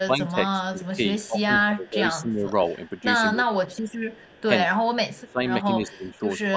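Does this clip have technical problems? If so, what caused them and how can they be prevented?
Yes. Speech suppressed in double talk, likely from an echo canceller that couldn't separate the near talker from loudspeaker echo while both sides spoke, pushes the speech down by about 15 to 25 dB at 0.06–2.47 s, 3.0–3.9 s, 4.66–4.83 s and 5.18–6.56 s. Better double-talk detection, or a headset, would prevent it.

Echo leak, likely from incomplete echo cancellation on a loudspeaker endpoint, returns a faint copy about 30 to 35 dB down, delayed 196 ms, at 1.23–1.27 s, 2.86–3.0 s, 3.66–4.42 s and 4.95–5.32 s. Headphones or a better-tuned canceller would stop it.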